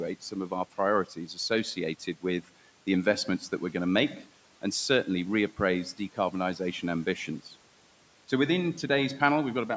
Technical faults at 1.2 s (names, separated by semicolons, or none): speech cut by the noise suppressor